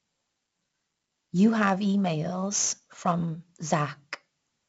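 From start to end the speech carries heavy 4-bit ADPCM compression damage: each sample is coded as a coarse step from a predicted value, so a gritty hiss rides on every loud syllable and sharp onsets smear where the step size lags. Unlike low-bit-depth noise, this grit rises and falls with the level. Nothing sounds above 7.7 kHz, which fits a 16 kHz rate at 64 kbps.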